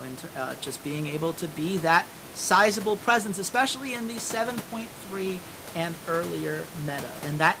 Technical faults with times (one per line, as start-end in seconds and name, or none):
none